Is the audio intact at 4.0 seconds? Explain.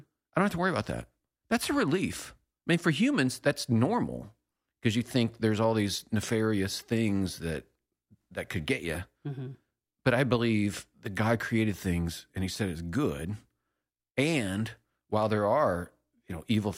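Yes, at 4.0 seconds the speech plays through intact, with no dropout, click, distortion or other fault audible at that moment.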